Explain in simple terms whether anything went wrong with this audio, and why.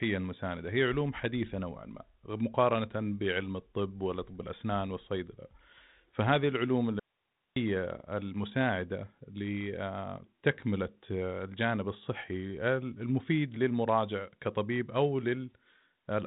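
Around 7.00 s the speech suddenly cuts out, and it snaps back at 7.56 s, leaving just over half a second of faint hiss in between. That's an audio dropout to a faint residue. The signal likely went missing briefly while the line stayed live, so only quiet background hiss came through. The narrow, phone-like sound, with nothing above 3.9 kHz, comes from the G.726 phone codec doing its normal job, not from a fault.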